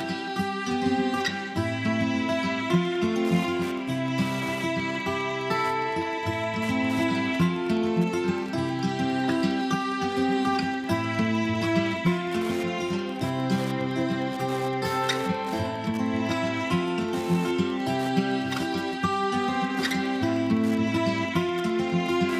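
A nearby Wi-Fi radio is coupling into the audio circuit, which rectifies its beacon transmissions, so from 2.85 s to the end the audio carries Wi-Fi interference: a steady tick every 102.4 ms, about ten per second, roughly 20 dB below the signal.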